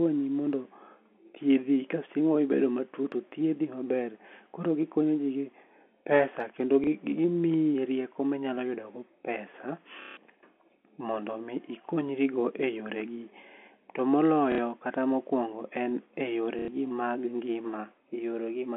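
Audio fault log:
6.84 to 6.87 s, 10.02 to 10.17 s, 14.52 to 14.58 s and 16.59 to 16.68 s: packet loss with last packet repeated. Audio went missing for 30, 150, 60 and 90 ms. The receiver filled each gap by replaying its last chunk. The gap lengths fit 30 ms packets. The replays ignore the pitch cycle. The single repeat after "gi pesa kendo" is a small blip. The longer runs buzz at about 33 Hz, heard as a robotic stutter after "mokwongo en", and worst at 10.02 s.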